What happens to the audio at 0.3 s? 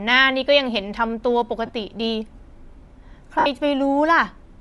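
At 0.3 s the speech has a breathy, grainy edge that runs through the whole clip, likely Bluetooth LC3 compression, with upper frequencies replaced by filled noise, consistent with 10 ms frames at around 48 kbps.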